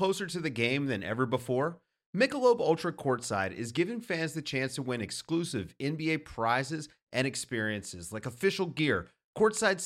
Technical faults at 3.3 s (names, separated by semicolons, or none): none